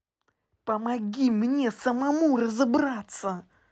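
Right from the start, the sender's clock runs a few percent slow against the receiver's, so there's clock drift between sender and receiver for the whole clip. The receiver's jitter buffer keeps draining, and with fresh audio arriving a bit too slowly it has to pad things out. You hear it as a faint unsteadiness in pacing, not one clear glitch. The top end stops around 8 kHz, which fits an Opus call path at roughly 24 kbps.

From 0.06 s to 3.38 s you get the repeated timing corrections that drift forces. The receiver keeps stretching the sound by repeating tiny slices, all in the same direction and at uneven spacing. Overall the stretch plays at about 98% speed, adding roughly a tenth of a second. Each edit is small, so it comes across as slight hiccups and a tempo that drags unevenly.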